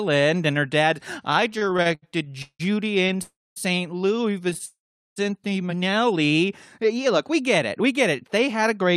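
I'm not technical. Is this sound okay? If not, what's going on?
No, it isn't okay. There are three kinds of trouble with the connection.

From 1.51 to 3.20 s there are repeated stalls (stutter). The speech stops and restarts 16 times, with the longest pause about 0.17 s. The last sound is stretched to fill each gap. About a quarter of that stretch is filler, so it drags.

There are two call audio freezes. One runs from 3.22 to 3.58 s and the other from 4.66 to 5.18 s. The sound stops, fades to mostly silence, then carries on where it left off. Nothing is lost. Late-arriving audio is the likely cause.

From 7.06 to 8.85 s there is a jitter buffer speed-up. The speech runs about 5% fast, at the same pitch. Tiny slices adding up to roughly a tenth of a second are cut out to catch up after the delays, so it sounds slightly hurried.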